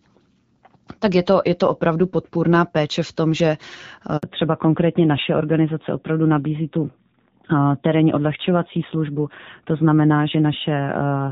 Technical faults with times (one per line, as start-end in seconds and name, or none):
4.17-4.23 handover gap
4.23-11.31 fallback to narrowband